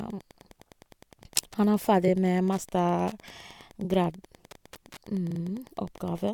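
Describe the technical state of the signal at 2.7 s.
At 2.7 s, as throughout the clip, Wi-Fi interference rectified from 102.4 ms beacons ticks about ten times a second, well below the speech, showing as evenly spaced thin vertical lines.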